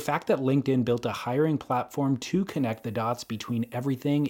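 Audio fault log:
2.48–4.29 s, low bit depth with noise shaping: from here to the end, the speech picks up a steady, thin hiss that climbs sharply toward the top of the band, sitting around 30 dB under the signal. That points to roughly 10-bit quantisation, with the rounding error pushed up into the highs.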